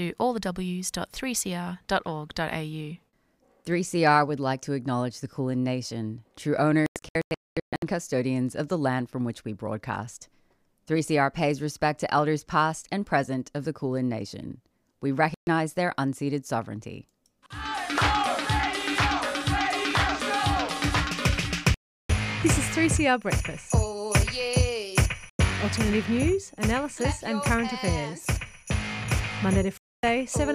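Digital broadcast dropouts cut the sound to flat silence at 6.86–7.83 s (scattered holes, longest about 224 ms), 15.34–15.47, 21.74–22.10, 25.30–25.40 and 29.78–30.04 s. These are lost frames, which show as blank vertical bands on a spectrogram and near-silent gaps in the waveform.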